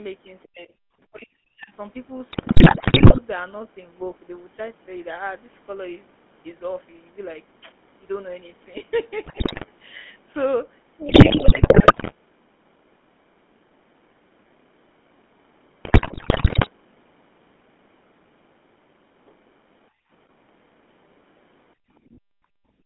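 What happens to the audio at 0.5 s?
Around 0.43 to 0.48 s, other side's voice leaking through appears as a faint second voice, roughly 25 dB below the talker. It is likely loudspeaker echo the echo canceller failed to subtract. Unlike room reverberation, it is a separate voice rather than a smeared tail of the talker's own sound.

From 0.46 to 0.73 s, speech suppressed in double talk takes over. The talker's voice sinks steeply, by something like 40 dB at its deepest, across roughly 300 ms while the other side is talking. The likely cause is the echo canceller ducking both voices because it cannot separate them. A packet-loss dropout would be an abrupt gap with glitches, but this is a level dip that tracks the overlap.

Through this moment, as everywhere in the clip, the GSM full-rate codec gives the voice a buzzy, gravelly roughness within a band of about 200 Hz to 3.5 kHz, consistent with a 13 kbps GSM stream. 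A plain low-pass filter would only dull the sound. This codec's coarse pulse excitation adds the grit.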